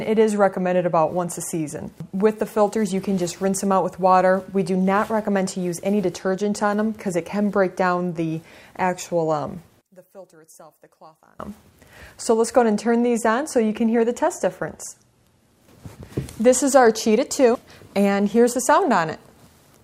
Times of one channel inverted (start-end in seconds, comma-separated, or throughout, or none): 9.81-11.39